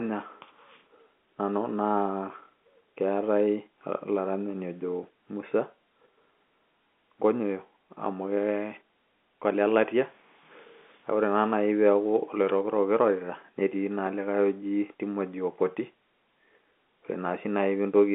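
Speech, with nothing technically wrong with it.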